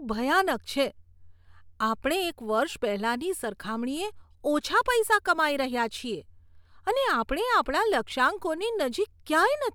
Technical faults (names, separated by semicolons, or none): none